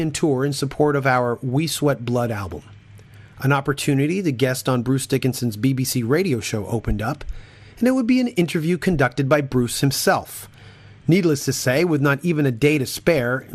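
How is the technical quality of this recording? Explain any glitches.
The technical quality is compromised by audible coding damage throughout, consistent with MP2 compression. From start to finish the sound is dull and carries a gurgling, granular grit. The likely cause is MPEG Layer II encoding at a low rate, which fits roughly 80 kbps. With so few bits, the upper sub-bands get switched off or coarsely quantised. On a spectrogram, the high frequencies appear as flickering blocks that drop in and out.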